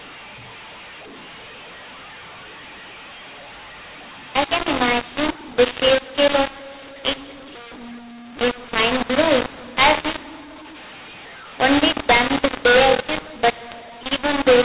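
Telephone speech, coded in G.711 A-law at 8,000 samples a second, nothing above 4 kHz, decoded as mu-law for the whole clip. That is the mu-law and A-law mix-up. The two laws map the 8-bit codes to different levels. So loud and soft samples land in the wrong places. The speech turns harsh and gritty throughout. The quietest samples are lifted well above silence, so the pauses fill with a steady hiss.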